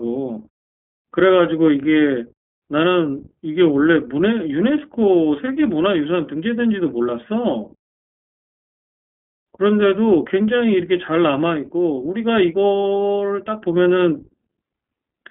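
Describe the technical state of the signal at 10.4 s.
At 10.4 s, as throughout, the iLBC codec codes short frames independently and drops everything above 3.6 kHz, leaving the speech narrow, rough and audibly synthetic.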